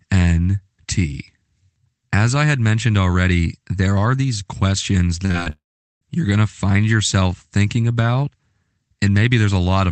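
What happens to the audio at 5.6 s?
Right there you're in a long network dropout, likely, running from 5.5 to 6.03 s. Audio stops arriving, so the receiver stretches the last sound into a fading buzz, then roughly 0.4 s of near-silence, and the audio resumes with that half-second simply gone.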